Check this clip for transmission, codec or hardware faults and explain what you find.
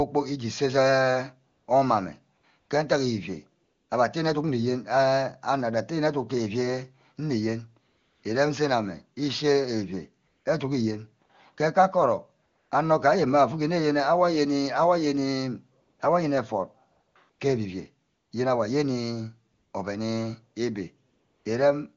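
AMR comfort noise occurs fifteen times between 1.51 s and 21.45 s, in pauses lasting 20 ms to 360 ms, the longest at 7.87 s and 21.09 s. In each gap the sender judged the line silent and stopped sending speech frames. The receiver then generated noise from a rough estimate of level and spectrum. The real background drops out, replaced by a smooth, steady hiss that switches in and out between phrases. The wideband codec itself adds little or no audible damage.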